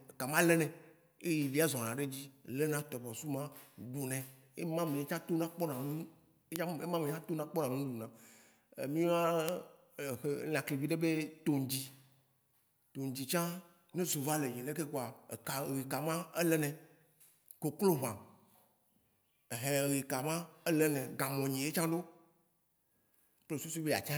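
Speech with three bit error spikes, single-sample ticks at 2.79 s (about -22 dBFS, between "zɔna ɖe dzi lena" and "tɔbɔsu ma ɖunɛ"), 6.56 s (about -10 dBFS, just before "ema me") and 9.49 s (about -10 dBFS). Each is one flipped bit jumping a sample by a power of two, heard as a broadband click unrelated to the sound.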